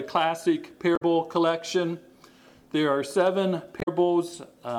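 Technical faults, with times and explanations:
0.93–1.03 s and 3.78–3.88 s: damaged data in a compressed stream. Twice the sound breaks up briefly, each time for about a tenth of a second. Here some bytes in the compressed stream were corrupted. The decoder cannot read those frames properly. It turns the bad data into a brief chirp, squawk, click or short hole and loses its place. It then hunts for the next valid frame header, and clean sound returns once it finds one.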